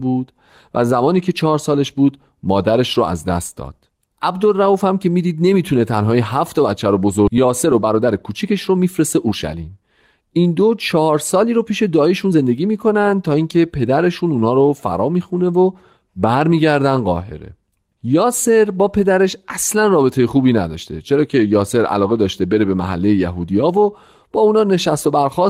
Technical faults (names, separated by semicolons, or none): skip ahead; jitter buffer speed-up